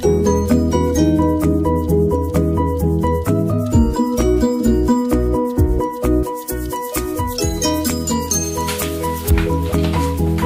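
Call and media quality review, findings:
Pre-emphasis left on, 6.23–9.31 s. Symptom: sudden thin, bright, sibilant top end, treble about 11 dB hot at 10 kHz relative to 1 kHz. Probable component: receive or playback de-emphasis stage not engaged. Mechanism: treble lifted before transmission and never cut back afterwards, leaving the high-frequency boost in the output. Tilt shape fits a J.17-style pre-emphasis curve. Fix: restore the matching de-emphasis.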